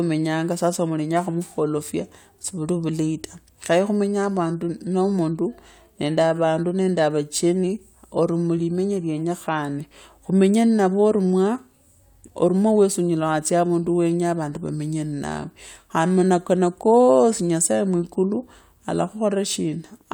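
No technical faults are audible.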